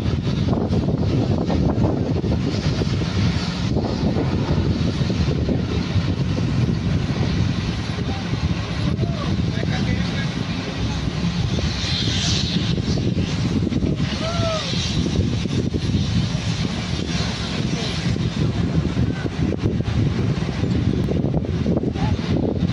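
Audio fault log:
21.04 s repeated buffer: a 1.45 ms chunk, fitting a 64-sample buffer, plays twice more with hard joins, giving a brief buzzy click rather than a silent gap.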